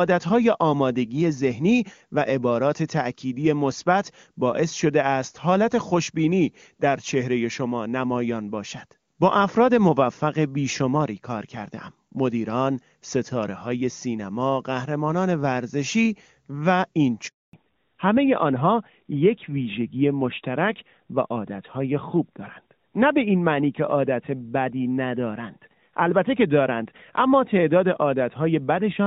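At 17.27 s a handover gap cuts the speech for 260 ms: no frames arrive while the call switches networks, so the sound drops to silence until 17.53 s.

From 17.53 s to the end, a fallback to narrowband removes everything above 4 kHz. The clear HD Voice sound before the gap, which fits AMR-WB at its top rate, turns dull and rougher, consistent with AMR-NB at 12.2 kbit/s.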